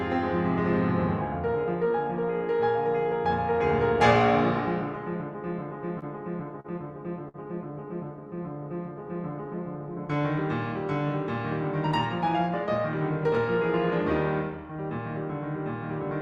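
Late packets emptied the jitter buffer three times, causing short stalls at 5.99, 6.60 and 7.28 s. Each time the music is held in place for 27, 43 and 57 ms, with a slight buzz or dip, before it resumes. At 8.94 to 9.61 s, a jitter buffer slow-down repeats small pitch periods to rebuild its reserve, adding 47 ms. The music plays at 94% speed without changing pitch. Through the Opus call path, the top end stops near 12 kHz, which fits a setting around 32 kbps.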